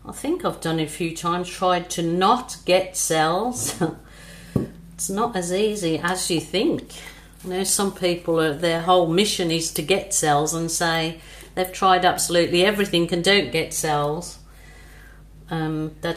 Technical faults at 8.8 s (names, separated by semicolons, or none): short stall from a late packet